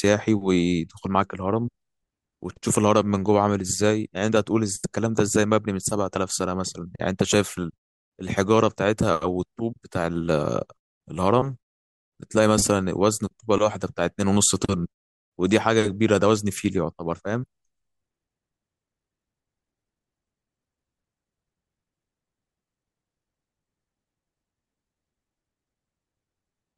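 Nothing in this speech recording stands out as a technical fault, so there's nothing here to flag.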